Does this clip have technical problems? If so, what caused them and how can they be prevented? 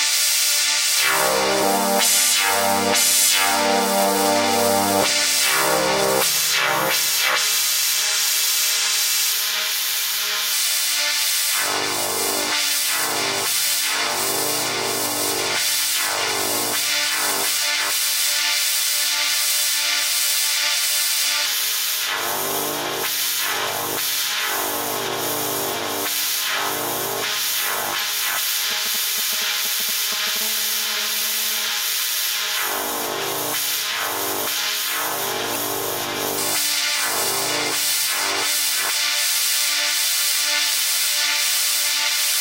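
Yes. Damaged data in a compressed stream: corrupted frames made the decoder lose sync and hunt for the next header, giving brief glitches at 6.21, 19.48, 25.69, 27.97 and 35.52 s. Verify files with checksums and use error-protected transfer or storage to prevent it.

GSM phone buzz: a nearby 2G phone on a call sent radio bursts 217 times a second, which the audio circuit rectified. This produced a steady, raspy harmonic buzz about 21 dB below the sound, from 30.41 to 31.70 s. Keep phones away from the recording chain or switch them to airplane mode.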